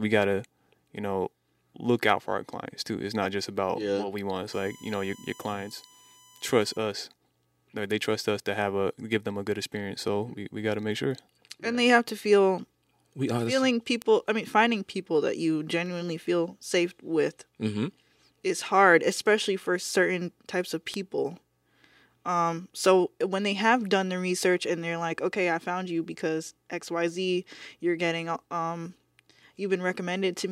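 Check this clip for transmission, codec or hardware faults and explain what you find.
Two kinds of fault turn up here: a stretch of USB whine and a pair of bit error spikes.

From 4.53 to 6.78 s there's USB whine, a steady, fixed-pitch tone built on 1 kHz but loudest at its third harmonic, 3 kHz, sitting roughly 25 dB under the speech. The bus pulls current in 1 ms frames, and that once-per-millisecond load leaks into the audio through shared power or ground. So you get a thin, constant whine riding underneath that doesn't follow the voice at all.

Then there are two bit error spikes, one at 14.02 s and one at 20.94 s, each peaking at about -15 dBFS. A flipped bit in memory or on the digital link makes two or three samples jump by a power of two and then snap right back. Because the jump is so brief, each one comes across as a single sharp tick, broadband and unrelated to the speech around it. 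Each error hit just a few consecutive samples, two in the first and three in the second.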